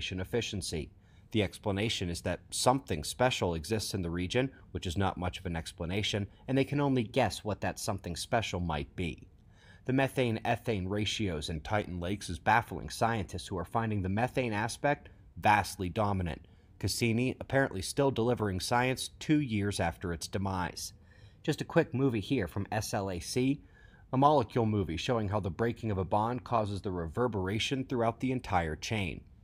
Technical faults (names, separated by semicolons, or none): drift correction step